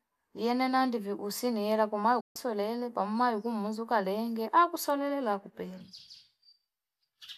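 At 2.20 s, just after "ndani usi niela kwamaana", the speech drops out in a digital broadcast dropout. The signal fades to silence over about 8 ms and stays muted until 2.36 s, when the audio resumes at "pamayo kumuzuka leenge akusalulile". The receiver stopped getting usable frames and muted its output instead of passing on corrupt data. The gap of about 144 ms fits roughly six lost frames, and whatever was transmitted during that stretch is simply missing.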